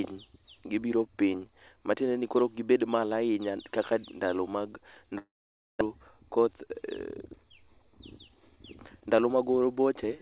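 From 5.18 to 5.83 s the audio is missing. The likely cause is a long network dropout: packets stopped arriving, so the receiver had nothing to play and filled the hole itself. The speech breaks into a brief buzzy continuation of the last sound that fades quickly. About half a second of silence follows before speech resumes, with roughly 0.6 s of the original never heard. The call path's narrowband sound, with nothing above 4 kHz, fits a G.711-type codec.

From 6.39 to 6.67 s comes a jitter buffer speed-up. The receiver's buffer had built up more audio than it wanted, so it trimmed short pitch-period slices in quick succession to catch up. About 40 ms was cut in total. Playback runs at roughly 111% speed with the pitch unchanged, so that stretch of speech sounds rushed and compressed.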